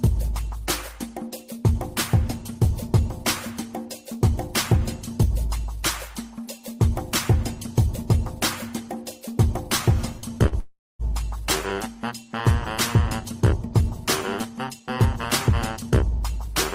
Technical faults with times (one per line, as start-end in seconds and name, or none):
10.19-10.55 short stall from a late packet
10.60-11.02 call audio freeze
14.49-15.06 jitter buffer speed-up
15.49-16.45 jitter buffer speed-up